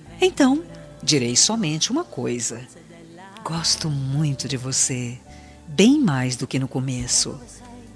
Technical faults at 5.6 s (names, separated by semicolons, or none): none